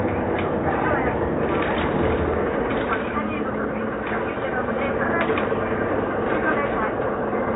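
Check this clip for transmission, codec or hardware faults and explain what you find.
No faults heard; nothing in the sound calls for action.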